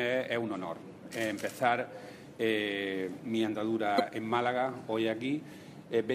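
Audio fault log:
3.96–4.00 s: damaged data in a compressed stream. A brief glitch cuts across the sound for about 40 ms. Corrupted bytes break the frames there. The decoder misreads them, loses sync and hunts for the next valid frame header, leaving a short glitch.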